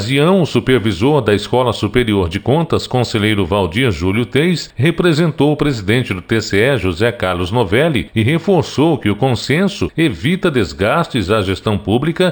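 Imaging from linear upsampling runs through the whole clip. The content stops near 6 kHz with a softened top, which fits a 12 kHz source raised to 48 kHz by straight-line interpolation. That weak filtering leaves a mirrored copy of the spectrum between 6 kHz and 12 kHz, roughly 25 dB down, heard as a faint metallic shimmer on bright sounds. A plain band limit would leave that region empty. Aliasing would fold energy downward into the band instead.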